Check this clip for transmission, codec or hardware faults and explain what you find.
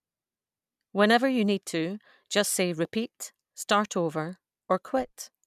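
No transmission, codec or hardware faults are audible anywhere in the speech.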